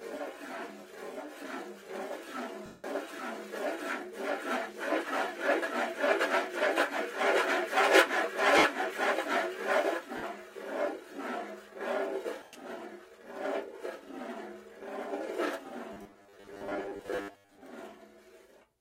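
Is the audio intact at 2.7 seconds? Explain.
No. From 2.66 to 2.84 s, about 180 ms, lost LE Audio frames break the sound. The LC3 decoder covers the gap by reusing the last good spectrum with random signs, so tonal content smears into noise that fades as the gap goes on; the length fits a run of 10 ms frames. Unlike a hard dropout, there is no sudden silence, and unlike a repeated-buffer glitch there is no looping: the sound dissolves rather than stutters.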